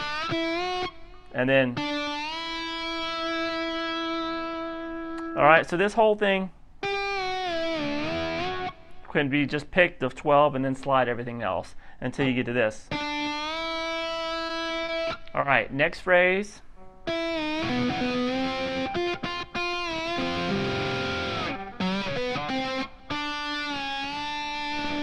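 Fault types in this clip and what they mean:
Short stall from a late packet, at 14.47, 14.85 and 15.40 s: each time a packet arrived late and the jitter buffer ran dry, so the receiver stretched the sound it already had, for 20, 30 and 30 ms, then resumed where it left off. Nothing is lost, but a sound is held briefly too long, and the playout delay grows by those same amounts.
Jitter buffer slow-down, from 16.00 to 16.78 s: with the buffer running low or its target delay just raised, the receiver rebuilt its reserve by repeating small pieces of the waveform many times over, adding 37 ms in all. Playback in that stretch runs at about 96% speed with the pitch unchanged, so the sound is drawn out slightly longer than it should be.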